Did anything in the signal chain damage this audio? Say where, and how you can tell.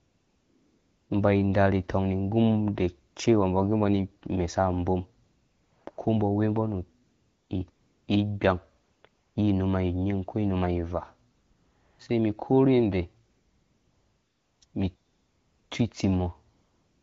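Yes. AMR comfort noise in the call path replaces the real background in thirteen pauses with steady, smooth synthetic hiss: thirteen gaps between 0.0 s and the end, 40 ms to 1.32 s long, including after "sai mi korhe yanda". Speech frames stopped during silence, and the receiver synthesised noise from a coarse level and spectrum.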